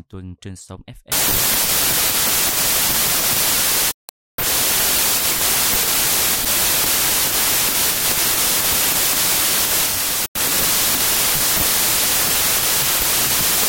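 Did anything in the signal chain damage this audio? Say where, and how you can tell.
Yes. From 1.12 s to the end, the sample-format conversion stage read packed 24-bit integer data as 32-bit integers, a wrong sample width. Right after "tuần trên sóng" the speech sinks into loud, harsh noise. Each 4-byte value straddles mismatched 3-byte samples, so only scattered values keep the true top bits. Four bytes consumed per sample instead of three means fewer samples, so the buried speech plays about 1.33 times fast and higher in pitch.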